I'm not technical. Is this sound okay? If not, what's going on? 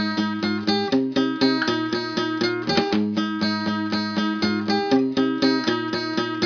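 Yes, this sound is okay, and there's nothing going on that needs fixing.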